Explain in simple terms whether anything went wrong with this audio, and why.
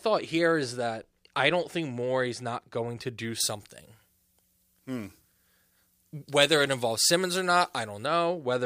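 From about 3.4 s to 8.06 s the speech suddenly turns thin, hissy and harsh, with sharp s sounds. This is pre-emphasis left on: the treble was boosted for transmission, the FM-style way, but the matching treble cut was never applied afterwards.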